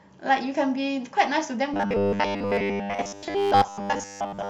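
From 1.74 s to the end at 4.50 s, the speech turns into robotic sound from repeated short buffers. The voice becomes a rigid, metallic buzz fixed at 100 Hz. It still tracks the words loosely. The likely cause is audio arriving too slowly, so playback loops the last fragment instead. A 100 Hz buzz fits a fragment about 10 ms long. Most of this stretch is repeated material, not new audio.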